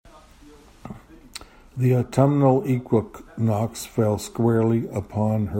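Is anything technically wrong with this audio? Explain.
No, nothing is technically wrong with this audio.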